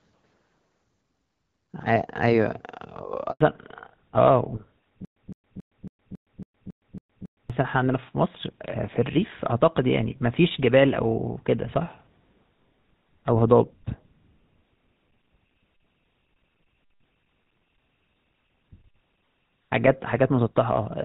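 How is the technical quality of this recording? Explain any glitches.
The recording has three clear glitches: a brief dropout, a lasting loss of high frequencies, and a stretch of repeating stutter. The opening seconds carry light wideband-codec colouring typical of HD Voice at around 12.65 kbit/s.

At 3.31 s the speech cuts out within a few tens of milliseconds and stays silent for about 100 ms, until 3.41 s. This is a handover gap: the call switched networks, and no speech frames arrived during the switch, so that sound is simply missing.

From 3.41 s to the end, the speech sounds duller and rougher, with nothing above 4 kHz. This is a fallback to narrowband. The call dropped from the HD Voice wideband codec to an older narrowband one, consistent with GSM full rate at 13 kbit/s, which discards everything above 4 kHz.

Between 5.05 s and 7.50 s, a burst of about 162 ms plays nine times, each repeat followed by roughly 114 ms of digital silence, giving an even 276 ms cycle. 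This stutter with silent gaps likely comes from a stalled stream replaying its last fragment at each retry, and the speech meant for that stretch is lost.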